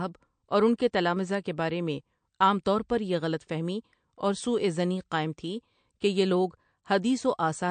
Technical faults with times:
0.00-7.70 MP3 compression

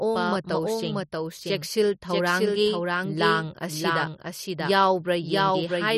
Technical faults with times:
0.00-5.97 doubled audio track

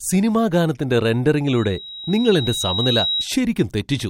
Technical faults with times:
1.48-3.29 loudspeaker feedback squeal

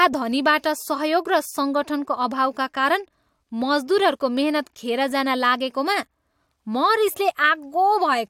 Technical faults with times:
none

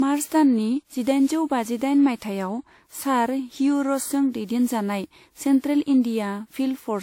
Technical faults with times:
0.00-7.02 generation loss

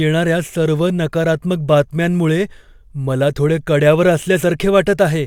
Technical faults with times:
none

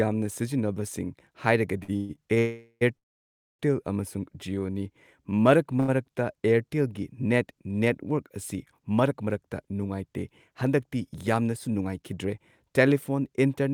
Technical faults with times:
1.83-2.38 repeated stalls (stutter)
2.38-3.61 call audio freeze
4.20-5.40 jitter buffer slow-down
5.80-5.90 short stall from a late packet
7.79-9.27 jitter buffer speed-up
11.09-11.82 jitter buffer speed-up

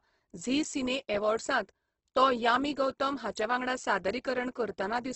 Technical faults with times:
0.00-5.15 Opus compression

